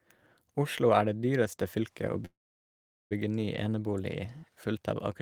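Between 2.25 and 3.13 s, call audio freeze: the last sound decays to 0.78 s of silence, then speech resumes with nothing lost, likely from jitter-buffer underrun.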